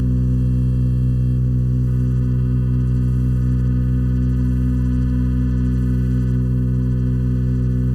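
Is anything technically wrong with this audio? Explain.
Yes. Channel delay (comb filtering) runs throughout the music. One channel lags under a millisecond. Summed to mono, evenly spaced notches start near 700 Hz. It sounds hollow.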